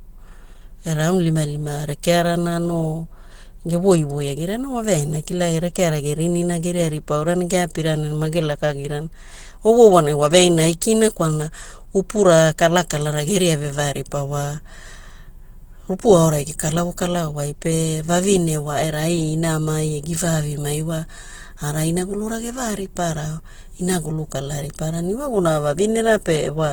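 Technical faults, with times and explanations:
Throughout, Opus compression: the speech sounds hoarse, grainy and muffled, with rough, noisy texture where detail should be clean. This likely comes from a low-rate Opus encoder running in its hybrid speech mode, which fits roughly 16 kbps and fills starved bands with noise.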